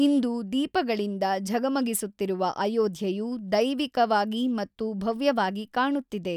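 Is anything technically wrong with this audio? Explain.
No, nothing technically wrong can be heard in this speech recording. There are no faults to point to anywhere in it.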